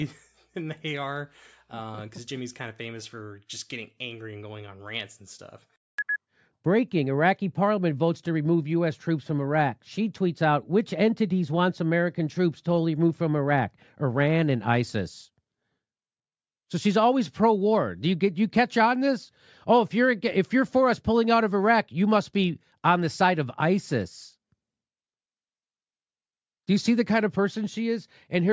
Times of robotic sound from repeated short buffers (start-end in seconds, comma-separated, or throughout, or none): none